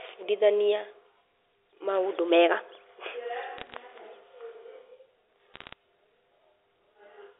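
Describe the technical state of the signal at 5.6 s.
At 5.6 s you're right inside a burst of bit errors on the digital phone line, running from about 5.54 to 5.73 s. Flipped bits, under half a percent of them, each corrupt single samples, so you hear sharp ticks and crackle laid over the otherwise band-limited telephone sound.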